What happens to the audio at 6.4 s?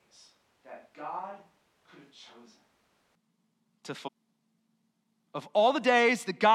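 Nothing goes wrong at 6.4 s; the audio plays through that moment intact, with no dropout, click or distortion.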